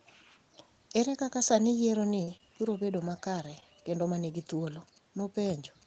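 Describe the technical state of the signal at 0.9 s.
At 0.9 s the speech is intact, with nothing above about 8 kHz, as expected after the call processing and Opus coding it has passed through.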